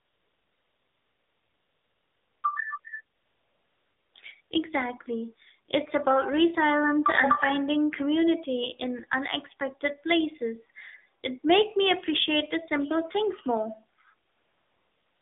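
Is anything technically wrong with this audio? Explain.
Yes. The speech has passed through the AMR narrowband mobile codec at a low rate, and there are stretches of AMR comfort noise.

AMR narrowband mobile codec, throughout: the speech was squeezed into a narrowband channel and rebuilt by a vocal-tract model driven by a few pulses per subframe. The damage is plainly audible and fits the 7.4 kbps mode. Only roughly 300 Hz to 3.6 kHz survives, so the speech sounds boxed-in and thin, with a buzzy, synthetic edge.

AMR comfort noise, at 0 to 2.44 s, 2.80 to 2.84 s, 3.16 to 4.14 s, 4.42 to 4.50 s, and 14.28 to 15.22 s just after "the simple things more": the sender judged these moments to be silence and stopped transmitting speech. The receiver then filled the gaps with synthetic noise built from a coarse level and spectrum estimate. The real background gives way to a smooth, steady hiss that switches in and out. 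The brief 40 ms and 80 ms stretches make the background flicker between the spoken passages.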